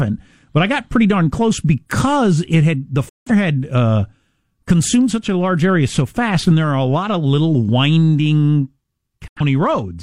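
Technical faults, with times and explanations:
3.09–3.31 s, digital broadcast dropout: the receiver stopped getting usable frames and muted, so the speech snaps to silence through a very fast fade of about 3 ms. The hole, around 170 ms of lost audio, fits roughly four missing frames. On a waveform it is a flat gap; on a spectrogram, a clean vertical blank band.
9.28–9.41 s, digital broadcast dropout: a shorter mute of around 85 ms, consistent with two lost frames, with the same abrupt 3 ms fade and a narrower blank column across all frequencies.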